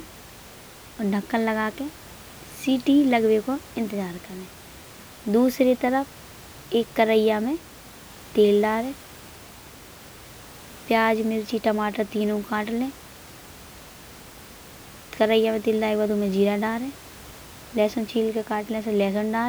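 Nothing stood out on listening to this speech clip, with only the room's background noise sitting about 22 dB below the speech.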